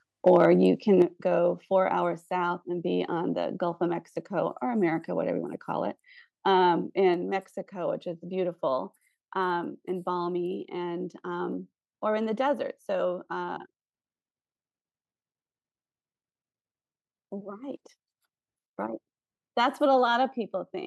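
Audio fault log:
0.27–0.45 s, microphone overload: this stretch sounds harsh and crackly because the tops of the loudest peaks are flattened, pushing about 2 dB past the converter's limit on a small share of samples. The mic input was likely set too hot for the converter.
1.02 s, 7.14 s and 20.7 s, microphone volume stepped down: speech and background both drop in one sudden step each time, by about 6 dB, then about 4 dB, then about 1 dB. The call software is likely lowering the device input after finding the mic too loud.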